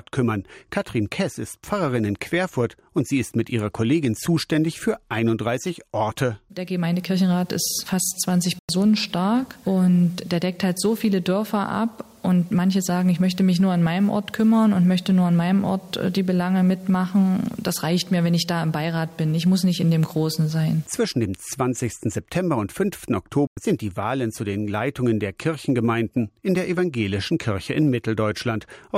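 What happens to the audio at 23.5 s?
A digital broadcast dropout mutes the audio from 23.47 to 23.57 s when the signal is lost or frames fail their checksum. The 96 ms gap, fitting about three lost frames, shows as a flat waveform and blank spectrogram column.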